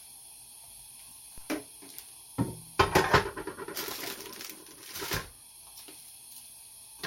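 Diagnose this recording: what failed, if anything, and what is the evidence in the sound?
A DC step at the converter or analogue input stage. At 1.38 s there is a single low thump. The sound itself carries on unchanged through it. The zero line of the waveform jumps at that instant and then drifts back. That recovery matches a high-pass around 5 Hz bleeding the offset away. The likely cause is a converter recalibrating or an input with an offset being switched in. The sudden shift in baseline is what produces the thump.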